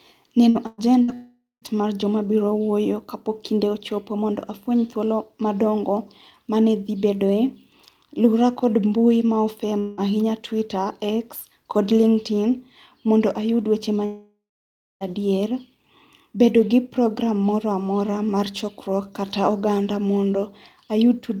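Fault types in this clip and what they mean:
burst of packet loss: three short gaps of about 60 to 120 ms near 0.49, 0.67 and 1.03 s, each bridged by a fading held sound with no silence.
long network dropout: longer gaps of about 0.2 to 1 s, likely from lost network audio; the longest fade from a held sound into silence, as before "mar joma biro".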